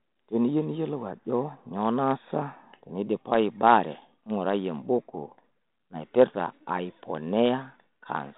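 No faults are present in this speech recording.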